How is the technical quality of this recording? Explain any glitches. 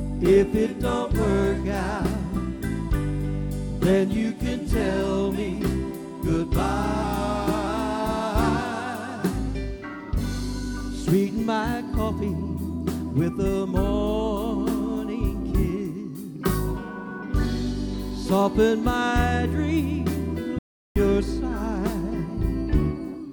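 Two glitches mark the recording: a brief pitch-and-speed sag early on and a short cut to dead silence near the end.

From 7.04 to 7.67 s there is a drift correction step. Software reconciling two clocks likely slowed playback in a single jump to refill its buffer, by about 5.5 percent for roughly 0.64 s. Because speed and pitch are tied together, everything drops by about 98 cents, nearly a full semitone, sounding suddenly flat and slightly sluggish.

From 20.59 to 20.96 s there is an audio dropout to silence. The input signal was lost, likely through a broken link or momentary disconnection, while recording continued writing silence. The result is a 371 ms hole of silence, with no room tone underneath. The sound stops abruptly mid-flow and resumes just as abruptly, and whatever occurred during that gap is missing.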